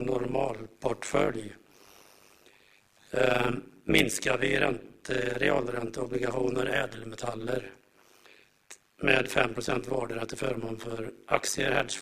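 Throughout, the audio was split into windowed frames and rejoined with an overlap that fails to sum to constant gain, causing overlap-add ripple. The level dips by about 60 dB once per frame, roughly a hundred times a second, giving a harsh, metallic buzz.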